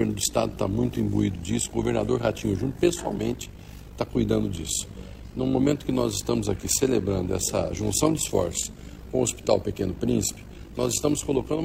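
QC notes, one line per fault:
Throughout: overlap-add ripple. Frames rejoin with uneven gain, so level dips about 11 dB around fifty times a second, giving a rough flutter.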